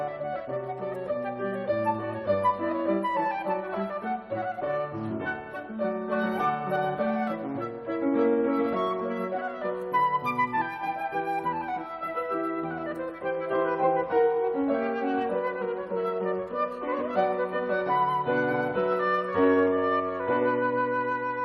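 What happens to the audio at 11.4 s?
At 11.4 s the audio plays through intact, with no dropout, click, glitch or other technical fault at that moment.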